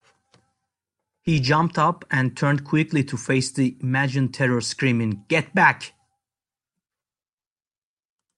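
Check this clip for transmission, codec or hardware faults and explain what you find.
Nothing faulty turns up anywhere in this speech recording.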